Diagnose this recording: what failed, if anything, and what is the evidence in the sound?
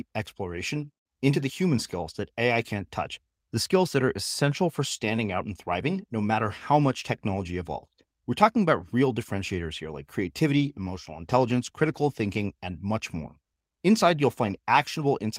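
A call bitrate drop from 10.59 to 12.55 s is a network-driven codec fault: speech turns coarse and rough, which fits the encoder falling from about 32 to 17 kbps.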